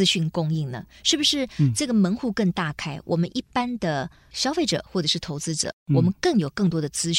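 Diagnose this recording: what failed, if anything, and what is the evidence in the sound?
Nothing in this speech recording points to a failure at any stage of the chain. There is no evidence of a fault anywhere in the clip.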